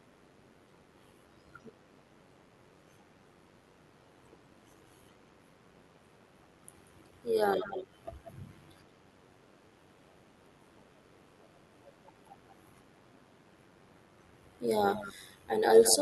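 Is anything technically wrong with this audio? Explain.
Yes, there are two problems. Overlap-add ripple runs through the whole clip: frames were recombined with uneven overlap gain, so the level pulses by about 6 dB around 100 times a second, giving a metallic buzz. There's also echo leak: faint delayed copies of the speech at 7.6–7.86 s, 8.24–8.31 s, 14.9–15.14 s and 15.81–15.98 s, arriving roughly 180 ms late and well below the main speech. The likely cause is a far-end loudspeaker whose echo canceller let some pickup slip back.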